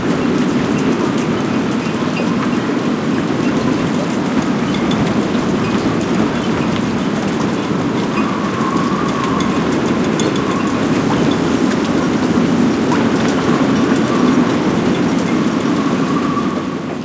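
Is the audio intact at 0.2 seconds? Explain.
Yes, at 0.2 seconds the sound is intact, with no dropout, glitch or distortion at that point.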